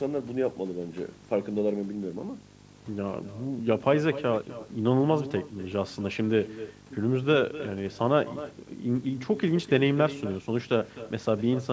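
From the first second to the last, a steady low buzz with a gritty hash above it sits under the speech at roughly 20 dB below it, joined by a high whistle at 15.6 kHz. This is video or display buzz. A screen or video cable is coupling its signal into the audio wiring, so the 50 Hz field rate of the picture comes through as the buzz and the horizontal line rate as the high tone.

Also running through the whole clip, each phrase is followed by a weaker and thinner copy of itself, about 15 dB down and arriving roughly a third of a second late, so the speech sounds doubled and smeared. This is echo with no canceller. The far end played the call through a loudspeaker, its microphone picked that sound up again, and nothing removed it before it travelled back over the network round trip.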